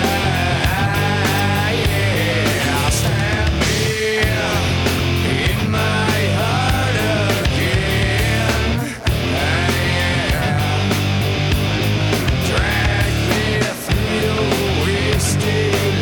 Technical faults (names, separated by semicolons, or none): corrupt frame decoded